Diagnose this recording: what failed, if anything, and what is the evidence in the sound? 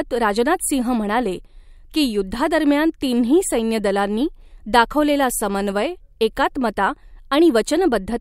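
Nothing failed; no fault is audible anywhere here.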